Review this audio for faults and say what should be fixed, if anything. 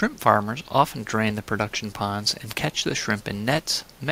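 Nothing stood out on listening, so there is nothing to point to for fixing.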